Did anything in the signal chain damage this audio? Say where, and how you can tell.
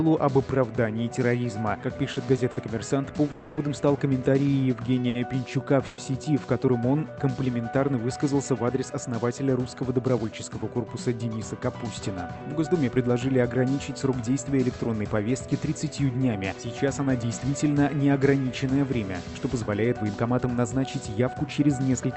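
Yes. The damage sits in the network and jitter-buffer stage of the call path. Repeated stalls (stutter) run from 2.13 to 2.58 s: three brief dropouts, the longest 50 ms, are patched over with continued sound. About a fifth of that span is filled, nothing is lost, and the passage drags and catches.

A call audio freeze shows at 3.31 to 3.59 s and again at 5.87 to 6.00 s. The last sound is held on and fades for 260 ms and then 110 ms without reaching silence, then resumes exactly where it stopped. Packets were likely delayed in transit, emptying the buffer.

A short stall from a late packet sits at 5.09 to 5.17 s. One sound is stretched for 60 ms while the receiver waits for a missing packet, then playback continues from the same point. Nothing is dropped, but that moment is held audibly too long.

Jitter buffer speed-up appears at 11.19 to 12.39 s and 16.53 to 17.49 s at 106% speed, and at 20.03 to 22.10 s at 107%. 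Tiny pitch-period slices are cut out to shed backlog, roughly 70, 70 and 150 ms, so the audio hurries without changing pitch.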